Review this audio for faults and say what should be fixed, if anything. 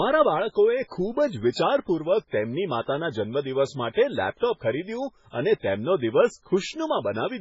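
The whole clip shows heavy MP3 compression damage, likely from encoding at a very low bitrate, around 16 kbps. Nothing remains above 7.6 kHz. Weak frequency lines flicker between frames, so the speech sounds watery and swirly, and consonant attacks smear. Prevent it by encoding at a much higher bitrate or keeping an uncompressed master.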